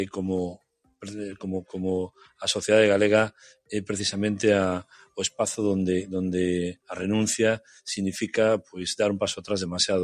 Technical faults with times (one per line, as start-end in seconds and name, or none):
0.00-10.03 noise suppressor applied to music or sounds
0.58-1.02 sound cut by the noise suppressor
2.14-2.40 sound cut by the noise suppressor
4.84-5.39 sound cut by the noise suppressor
7.60-7.82 sound cut by the noise suppressor